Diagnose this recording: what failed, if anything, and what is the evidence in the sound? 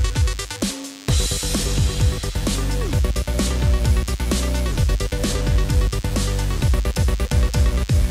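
The failure is in the analogue stage: DECT cordless phone buzz runs through the whole recording, a thin, steady 100 Hz buzz rich in harmonics, roughly 25 dB below the signal. A nearby DECT handset or base transmits a burst every 10 ms, and the audio circuitry rectifies each one.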